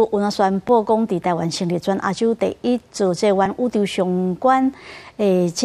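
At 0.69 s and again at 3.46 s the sound jumps forward with no gap of silence, a likely dropped buffer (overrun): roughly 3 ms of samples were overwritten before being read, so the edges are butted together. A dropout would leave a hole instead.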